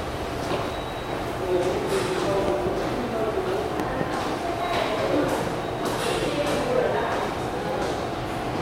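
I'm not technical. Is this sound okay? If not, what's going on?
No, there are three loud pops in it. The first is a single sharp pop at about 0.68 to 0.70 s. Then come two double pops, at 2.48 to 2.69 s and 3.80 to 4.03 s, and those two stand out more. The sound keeps going underneath each one. A loud pop like this is most likely a sudden electrical jolt, such as a cable being bumped, a switch flicking or a static spark, that got mixed into the signal.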